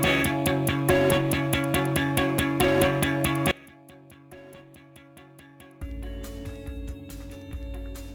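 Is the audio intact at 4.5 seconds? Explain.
No, at 4.5 s you're inside an audio dropout to a faint residue running from 3.51 s to the end. Only a faint leak remains, roughly 25 dB down, likely from the signal cutting out while the path stayed live.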